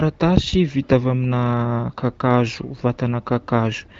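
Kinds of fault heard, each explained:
No faults found in this speech; the AMR-WB (HD Voice) coding at 15.85 kbit/s leaves nothing above about 7.6 kHz, as that codec does.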